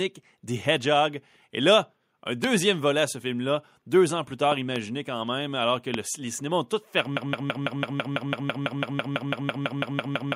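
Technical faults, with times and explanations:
2.44–2.46 s, 4.52–4.78 s and 5.94–5.96 s, loud pop: sharp transients sit on top of the speech, which carries on underneath. There is a single pop after "là un", a pair in quick succession after "deux ans plus", and another single pop after "quand même alors que". Each peaks at about 15 dB above the speech. The likely cause is a voltage pulse from a plug, switch, static discharge or driver glitch, which the following circuitry shaped into a brief thump.
7.17 s to the end, broken-record loop: a 166 ms fragment repeats exactly, back to back, about 19 times until the audio ends. The rapid stutter comes from the likely stalling of the player, encoder or stream, which kept re-sending the last fragment it held. The speech that should have played during those final seconds is lost, so the clip never resumes normal content.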